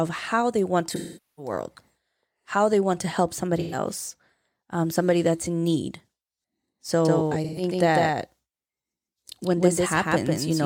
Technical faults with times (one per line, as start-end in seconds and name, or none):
0.95-1.52 AAC frame loss with concealment
3.59-3.78 AAC frame loss with concealment
7.05-10.65 doubled audio track
7.44-7.62 AAC frame loss with concealment